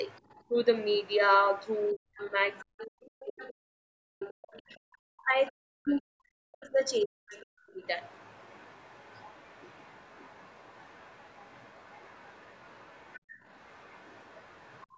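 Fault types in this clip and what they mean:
Other side's voice leaking through: the echo canceller likely left part of the loudspeaker signal in the microphone, so a faint second voice, well below the talker, runs under the speech from 0.04 to 4.76 s, from 5.85 to 6.0 s, and from 6.92 to 14.85 s.
Speech suppressed in double talk: with both sides talking at once, the canceller likely could not separate its own talker from the echo and turned both down, so between 1.92 and 7.82 s the speech dips very deeply, for around four seconds in all.
Background gated by the echo canceller: the canceller clamped the microphone hard while the loudspeaker was playing, so the room sound drops out by about 29 dB from 13.19 to 13.43 s and by about 21 dB from 14.86 s to the end.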